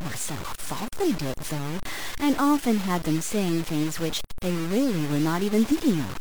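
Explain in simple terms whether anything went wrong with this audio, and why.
Gritty, grainy distortion rides on the speech from start to finish, roughest in quiet moments. That is low bit depth without dither, likely truncation to about 4 bits.

At 5.67 s the speech jumps ahead, skipping about a tenth of a second. Those are compressed frames skipped, which fits roughly two lost frames.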